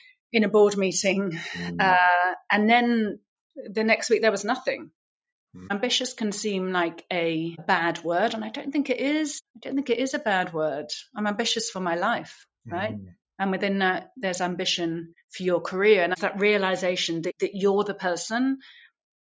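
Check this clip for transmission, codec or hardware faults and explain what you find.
Nothing to report: the audio shows only the ordinary effects of call microphone processing, with the lowest bass rolled off and no content above 8 kHz, both normal for that path.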